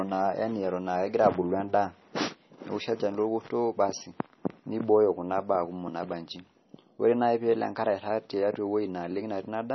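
Throughout this speech recording the treble stops abruptly at 5.9 kHz, and the remaining sound has a watery, swirling quality as weak spectral detail flickers in and out from frame to frame. Sibilants turn into metallic chirps and consonant attacks smear. This is heavy damage, likely from MP3 compression at a very low bitrate, consistent with around 24 kbps. A simple low-pass filter would dull the sound evenly, without this shifting, warbling texture.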